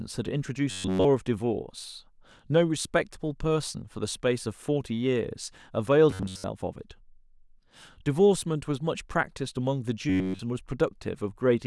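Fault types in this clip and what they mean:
Robotic sound from repeated short buffers: three brief stretches of the speech, at 0.71 to 1.05 s, 6.11 to 6.44 s and 10.09 to 10.39 s, turn into a rigid metallic buzz fixed near 94 Hz that only loosely follows the words. The likely cause is audio arriving too seldom, so playback loops a fragment of about 10.7 ms. That loop replaces the real signal completely in the first and last bursts and for most of the middle one.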